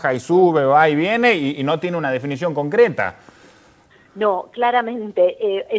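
No technical faults can be heard in the audio; it has come through a WebRTC call path whose wideband codec, which fits G.722, leaves nothing above 8 kHz.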